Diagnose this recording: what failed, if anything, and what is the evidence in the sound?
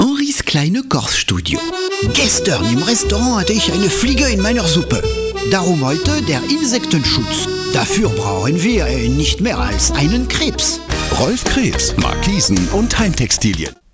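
No fault found in this recording.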